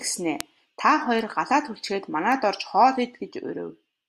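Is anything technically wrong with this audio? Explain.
Yes. Bit error spikes occur at 0.41, 1.19 and 2.32 s in this speech. A single flipped bit makes one or a few samples jump by a power of two and snap back, giving sharp broadband ticks unrelated to the sound, peaking near about -2, -20 and -14 dBFS.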